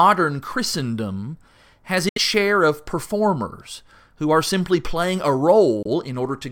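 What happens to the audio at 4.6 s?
Nothing goes wrong at 4.6 s: the speech carries on intact through that moment, with no dropout, click, distortion or other fault.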